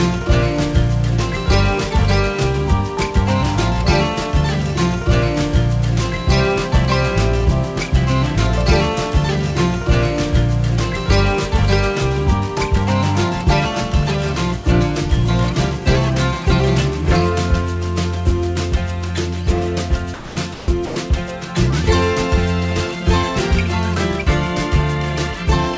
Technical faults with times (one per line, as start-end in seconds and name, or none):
20.14-20.96 sound dropped by the voice detector